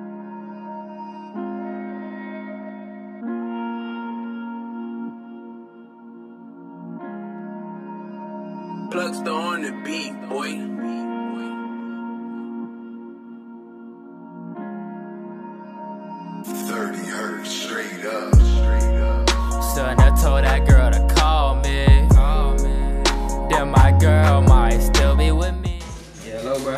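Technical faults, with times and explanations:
No technical faults can be heard, so there are no times or explanations to give.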